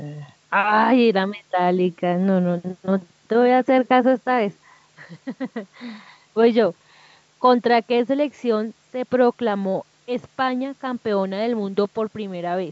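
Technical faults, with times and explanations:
There are no technical faults in this speech clip, so there are no times or explanations to give.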